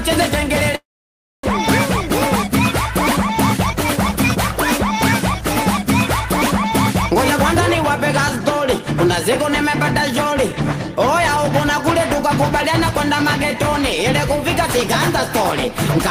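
From 0.75 s to 1.45 s the sound breaks off. What follows is a short buzzy continuation of the last sound that fades quickly, leaving about 0.61 s of silence before the audio resumes. When it returns, about 400 ms of material is gone. This is likely a long network dropout: the receiver concealed roughly 0.68 s with synthesized fill, and playback delay shifted by around a third of a second.

Three jitter buffer speed-ups follow. From 2.02 s to 6.25 s the audio plays at 103% of normal speed, with about 150 ms trimmed. From 7.98 s to 8.80 s it runs at 105%, with about 50 ms removed. From 9.50 s to 10.54 s it is again at 103%, with about 40 ms cut. In each case the receiver drained its excess buffered audio by deleting short pitch-period slices, so pitch stays constant while the pacing runs faster.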